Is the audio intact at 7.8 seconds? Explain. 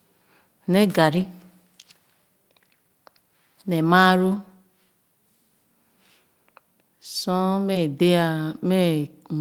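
No. From 7.73 to 7.77 s, short concealed packet loss left about 20 ms undelivered, and the receiver extended the preceding sound for 15 ms, leaving a brief smear or wobble. Within that span, at 7.75 to 7.77 s, a lost packet rebuilt from error correction came from the next packet's low-bitrate copy, so those 20 ms sound rougher and noisier rather than silent.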